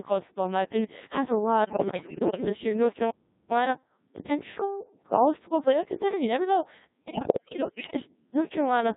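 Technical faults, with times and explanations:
Throughout: Codec 2 vocoder. The speech is carried at 1.6 kbit/s as pitch, voicing, energy and a spectral envelope only. The decoder rebuilds it from sine waves, so the waveform is lost. The voice sounds heavily robotic and buzzy.
1.65 to 2.49 s and 7.08 to 7.97 s: bit errors on digital voice radio. Roughly 15 percent, then 20 percent, of bits arrive flipped. Each wrong bit corrupts a frame's pitch, level, voicing or spectrum. The voice jumps and breaks into bleeps, warbles and robotic gibberish.
3.51 to 6.51 s: time-compressed catch-up. After a stall the player clears its backlog by removing small slices and cross-fading the joins. Playback runs at 1.1 times normal speed. The speech sounds hurried, but its pitch stays normal.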